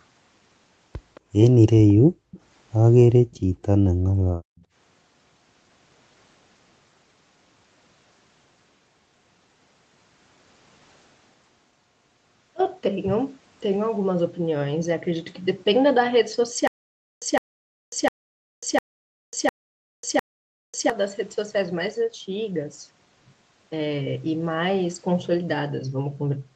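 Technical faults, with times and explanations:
1.15 to 4.64 s, echo leak: Short delayed copies of the speech come back at 1.15, 2.31, 3.31 and 4.57 s, each trailing the original by 218 ms and sitting quiet, roughly 25 to 40 dB below the main speech. They're faint, clipped scraps rather than a full repeat, which points to a far end on loudspeaker whose echo canceller likely let a bit of its own playback slip back up the line.
1.94 to 4.65 s, background gated by the echo canceller: The room tone ducks hard three times, at 1.94 to 2.31, 3.12 to 3.63 and 3.90 to 4.65 s, falling by about 37 to 40 dB before coming back. That's the canceller clamping the mic while the loudspeaker plays, then releasing, so the floor sort of pumps in and out. Those dips line up with the nearby echo scraps, which fits the same canceller struggling.
16.67 to 20.90 s, stutter with silent gaps: The same 159 ms burst of sound plays six times, each followed by about 545 ms of dead digital silence, so it repeats on a steady 704 ms beat. 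Whatever should have played across those four seconds is simply gone. That even replay-then-nothing rhythm is the signature of a stalled stream, likely a player retrying its last fragment and then running dry each time.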